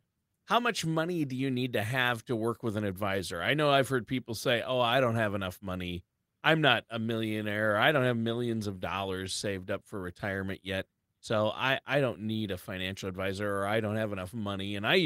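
No technical faults occur at any point in the recording, so there is nothing to describe in time order.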